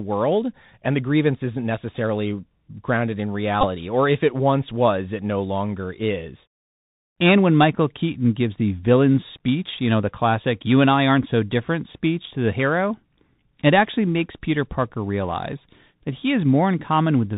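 Throughout, the Bluetooth CVSD headset codec squeezes the speech through a narrowband 64 kbps one-bit link. The spectrogram shows nothing above 4 kHz, s sounds are scratchy, and a granular hiss sits under everything.

From 3.61 to 3.65 s, between "isn't necessarily grounded in" and "or if it once", a Bluetooth headset packet is repeated. About 19 ms is lost, which fits roughly five re-decoded packets, and the repetition gives a brief buzz near 267 Hz. The waveform shows identical short cycles there, and the spectrogram shows evenly spaced harmonic lines.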